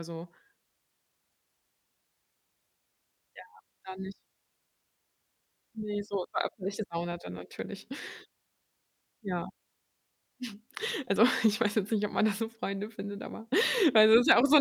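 No technical faults can be heard anywhere in the recording; the signal stays intact and steady throughout.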